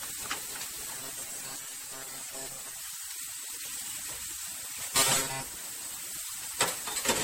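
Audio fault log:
throughout: generation loss. The sound has a swirly, smeared and hollow quality, with blurred attacks and nothing above 16.5 kHz. This likely comes from the audio being decoded and re-encoded with MP3 around ten times, in a way that fits a chain at roughly 64 kbit/s. Each pass quantises again on a shifted frame grid, so the coding noise and spectral gaps build up. The result is more damage than one encode at that rate would leave.
0.95–2.80 s and 4.93–5.44 s: robotic sound from repeated short buffers. In both stretches the sound becomes a rigid, metallic buzz at 134 Hz that still loosely follows the original contour. The likely cause is new audio arriving too seldom, so playback fills the gaps by looping the last piece of about 7.5 ms while the real material is skipped. Most of each stretch is repeats. The fixed loop length imposes the steady buzz pitch.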